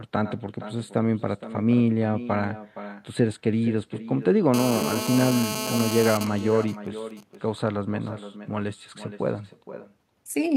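Echo with no canceller runs throughout. The far end's loudspeaker feeds its microphone. A copy about 14 dB quieter returns roughly half a second later.

From 4.54 to 6.17 s comes GSM phone buzz. A nearby 2G phone in a call pulses at 217 Hz. The circuit rectifies it into a steady, raspy buzz about 7 dB below the speech.

From 6.21 to 7.35 s come GSM signalling bursts. The phone's user falls silent, so it transmits in short groups. These sound like even ticks with a longer buzz twice a second, roughly 15 dB down.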